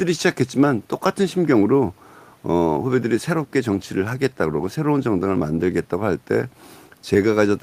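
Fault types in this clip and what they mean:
No technical faults are present.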